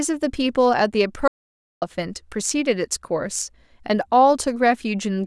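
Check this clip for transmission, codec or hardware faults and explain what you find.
One fault is present. From 1.28 to 1.82 s, an audio dropout to silence cuts the speech abruptly, likely from lost input. The waveform flatlines and the spectrogram goes completely blank, with no room tone.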